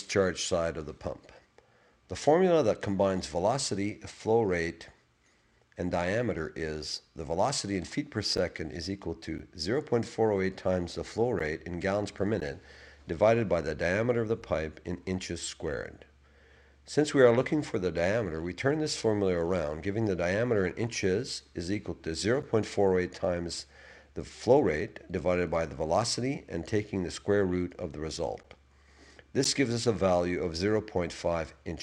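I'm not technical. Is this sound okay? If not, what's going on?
No. The audio has short dropouts known as gaps between stream segments. It arrives in one-second pieces, and at some joins the timing leaves a tiny hole that the player fills with silence. You hear a brief, sharp-edged break of about 7 to 14 milliseconds at 8.37, 9.38, 11.39, 12.40, 14.42, 22.42, 28.43 and 29.44 seconds, each falling on a one-second boundary. Nothing is cut out; silence is inserted.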